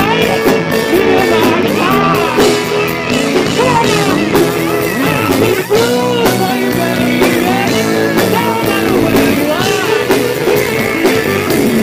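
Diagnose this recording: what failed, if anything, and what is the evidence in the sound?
A bit error spike, from a flipped bit in storage or on a digital link, at 1.63 s and 9.49 s: each a lone broadband tick near about -10 dBFS, lasting one sample and three samples respectively. Unlike a buffer dropout, no audio goes missing, and the tick ignores the surrounding sound.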